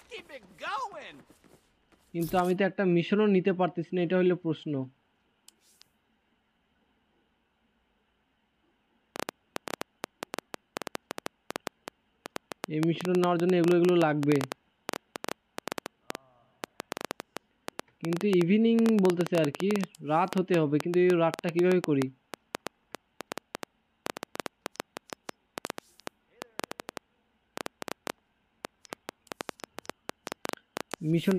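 A pulse source, likely interference from nearby equipment or a faulty connection, injects a train of clicks from 9.16 s to 31.32 s. About 150 similar pulses arrive unevenly, around 7.5 per second, peaking about 15 dB above the sound as ticking and popping.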